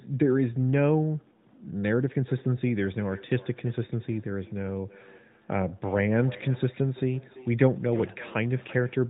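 From 2.28 s to the end at 9.09 s the speech carries a feedback echo between two devices: a second device in the same room replays the far end, its microphone recaptures that output, and neither echo canceller removes it. Each phrase returns around 300 ms later, thinner and ringing, peaking at about 20 dB below the direct speech. Underneath, the band-limited, lightly coloured AMR narrowband mobile codec sound fits its highest 12.2 kbps mode.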